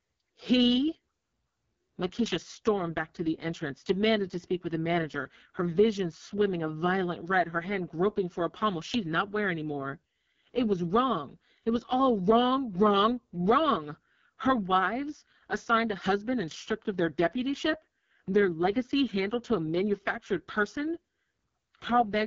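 From start to finish the speech has that rough, raspy AMR wideband (HD Voice) codec sound, which fits its lowest 6.6 kbit/s mode, with nothing above about 7.3 kHz.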